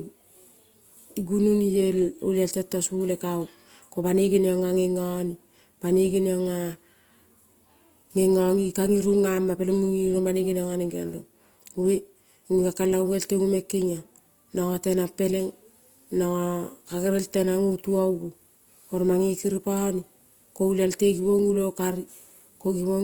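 Throughout, the speech sounds grainy, rough and noisy, though the bandwidth stays full up to 20.2 kHz. The likely cause is Opus compression in music mode, fitting about 24 kbps.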